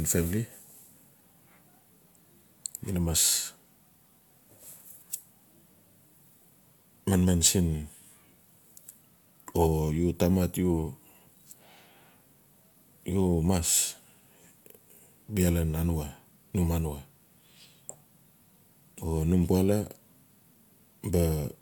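No faults can be heard anywhere in the recording.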